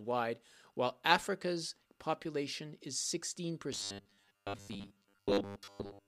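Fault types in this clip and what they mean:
Robotic sound from repeated short buffers: From 3.73 s to the end, the speech turns into a rigid, metallic buzz at 100 Hz. This is likely audio arriving too seldom. The buzz fits a 10 ms chunk repeating, and repeats fill most of the sound.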